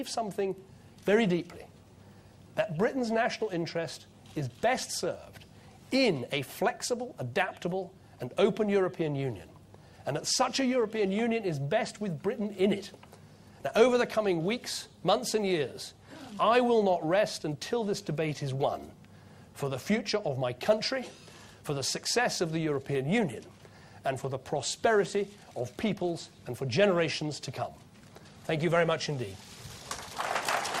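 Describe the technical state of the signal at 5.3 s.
At 5.3 s the signal is intact, with no audible dropout, distortion, glitch or level disturbance.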